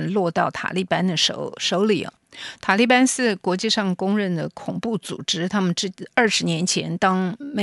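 Listening closely to the speech, nothing stood out as a technical fault at any point.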